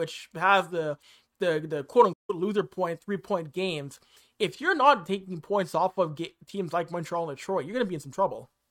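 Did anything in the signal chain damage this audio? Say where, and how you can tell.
Yes, at the playback stage: the player likely ran dry of buffered data or had its output thread blocked, causing a playback stall. The speech cuts to silence from 2.13 to 2.30 s, a gap of about 157 ms, before the output resumes.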